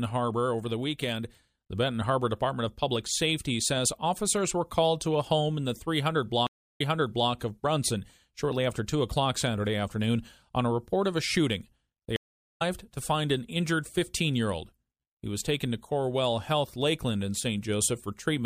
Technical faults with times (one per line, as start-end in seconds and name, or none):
6.47-7.30 stream reconnect
12.16-12.62 stream reconnect